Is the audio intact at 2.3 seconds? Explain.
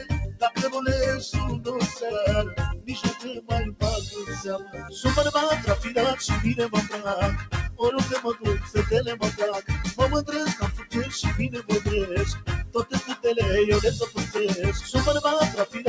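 No. At 2.3 seconds the sound is affected by a noise suppressor applied to music or sounds, which runs through the whole clip. A suppressor tuned for speech treats sustained tones, ambience and reverb as noise and pulls them down. Onsets pass through, but held sound and decaying tails sink by up to about 10 dB. The result is audible pumping and a thinned, fluttering texture. The call path's G.722 coding is also present, leaving nothing above 8 kHz.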